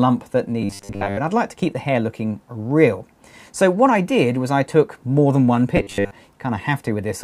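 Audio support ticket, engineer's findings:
Robotic sound from repeated short buffers, 0.62–1.18 s and 5.77–6.11 s: rigid 100 Hz buzz. Likely an audio-buffer underrun looping about 10 ms of audio, most of it repeated. Spectrogram shows evenly spaced 100 Hz harmonic comb.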